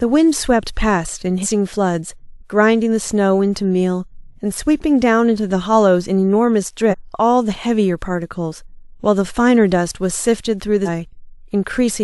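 At 1.42, 6.90 and 10.85 s, compressed frames are skipped: the speech jumps ahead about 100 ms, then about 300 ms twice, in steps of roughly 46 ms frames.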